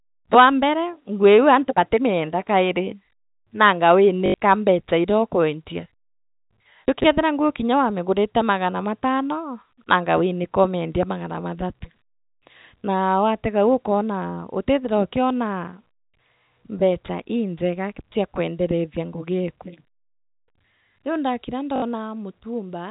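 From 4.26 to 4.34 s, packet loss with the last packet repeated fills 80 ms, which fits four repeated 20 ms packets. It gives a robotic stutter, seen as identical repeating blocks. From 6.88 to 7.04 s, chunks out of order play a 40 ms chunk three chunks late. The result is a jumbled moment with three abrupt waveform breaks. The stutter returns from 21.76 to 21.82 s, covering 60 ms.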